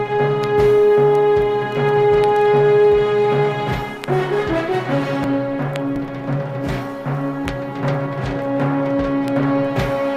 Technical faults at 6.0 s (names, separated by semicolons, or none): dropped buffer (overrun)